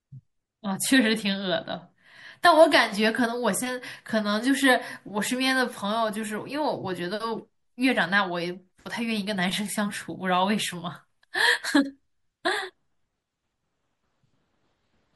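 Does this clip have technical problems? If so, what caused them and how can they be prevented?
Yes. Throughout the speech the sound is watery and swirling, with dulled treble and metallic s sounds. The likely cause is MP3 compression at a low bitrate that fits about 64 kbps, where the encoder cuts the top end and flickers weak frequency lines. Encoding at 128 kbps or higher prevents it.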